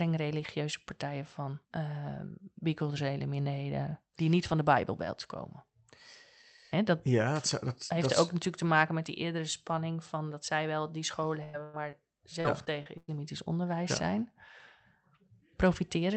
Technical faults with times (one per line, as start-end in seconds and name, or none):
11.43-11.75 burst of packet loss
11.91-11.95 short concealed packet loss
12.41-13.10 repeated packet loss (robotic sound)